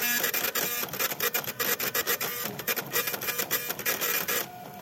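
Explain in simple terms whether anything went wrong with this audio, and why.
Nothing went wrong here; I hear no technical fault anywhere in the audio.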